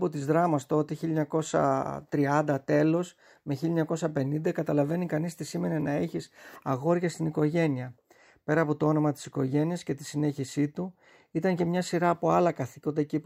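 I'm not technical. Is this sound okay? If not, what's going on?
Yes, this sound is okay, and nothing is going on with it that needs fixing.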